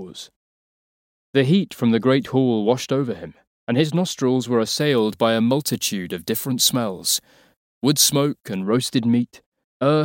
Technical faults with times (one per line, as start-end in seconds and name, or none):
4.80-8.63 pre-emphasis left on